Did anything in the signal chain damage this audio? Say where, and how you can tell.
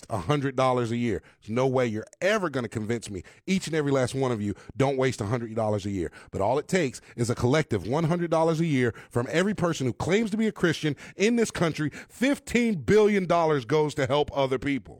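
Yes: a gap between stream segments at playback, where segment timestamps misaligned, inserting about 3.3 ms of hard-edged silence at 9.57 s, at a 4-second segment boundary.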